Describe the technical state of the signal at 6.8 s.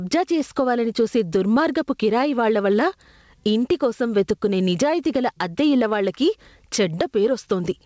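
At 6.8 s the speech shows gain pumping, present throughout the clip: the gain swings by about 15 dB, squashing the dynamics. The likely cause is excessive microphone gain driving a fast limiter. Band-limiting to 8 kHz from the G.722 call codec is also audible.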